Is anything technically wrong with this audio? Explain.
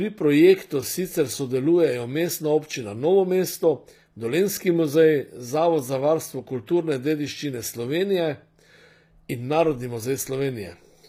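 Yes, there's a problem through the whole clip. The speech has a gritty, metallic top end, and the s sounds come out lispy. Nothing reaches above about 15.5 kHz. That points to HE-AAC compression as the likely cause, at a low bitrate that fits something around 24 kbps. The codec keeps only the lower spectrum and synthesizes the treble by copying lower bands upward, so the highs' harmonics don't line up with the real ones.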